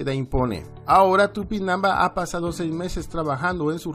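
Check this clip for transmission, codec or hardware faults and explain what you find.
No transmission, codec or hardware faults can be heard.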